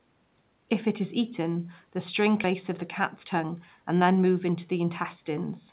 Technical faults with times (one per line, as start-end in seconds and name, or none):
2.44-2.54 skip ahead
3.01-4.57 jitter buffer speed-up